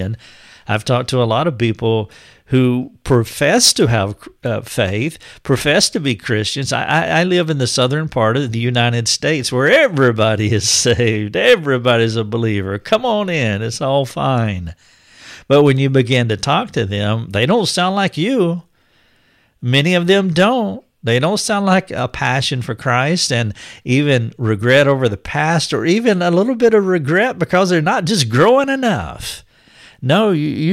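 Speech with hard clipping throughout: driven about 6 dB past full scale, only a small fraction of peaks are sliced flat, giving brief crackles on loud syllables. Unlike soft saturation, which rounds peaks and warms the tone, these flat tops add sharp, high harmonics.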